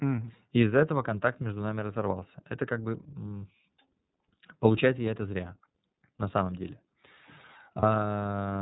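Throughout, the iLBC codec limits the speech to narrowband, with nothing above 4 kHz on a spectrogram, and leaves it plainly rough and synthetic, consistent with 13.33 kbps and 30 ms frames.

At 7.80–7.83 s, lost iLBC frames (a 30 ms gap) are concealed by repeating the last pitch cycle with noise. This creates a brief buzzy held vowel, which shows as flat, smeared harmonics on a spectrogram.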